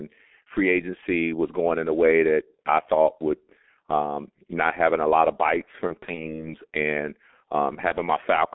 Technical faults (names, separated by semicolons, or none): G.723.1 codec; VoIP packet loss concealed by the speech codec